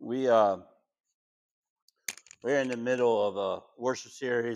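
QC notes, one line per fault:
No faults detected.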